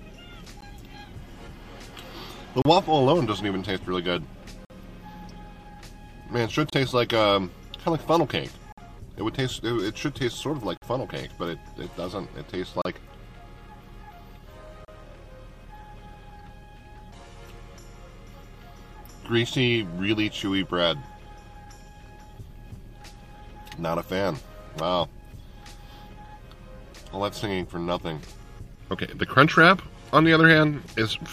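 Gaps between stream segments: the time stamps of consecutive 2-second segments leave small holes, and the player fills each with silence, so no audio is lost. Hard-edged dropouts of about 17 to 53 ms cut the sound at regular two-second intervals: at 0.61 s, then 2.62–2.65, 4.65–4.70, 6.70–6.73, 8.72–8.78, 10.77–10.82, 12.82–12.85 and 14.85–14.88 s. Each is a brief stop-start interruption.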